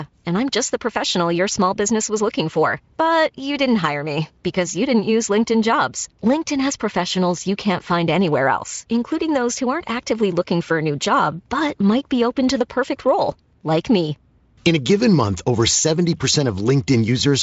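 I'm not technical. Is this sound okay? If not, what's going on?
Yes, no faults: the speech has gone through the Speex codec, which leaves nothing above about 7.7 kHz, and that is normal for it.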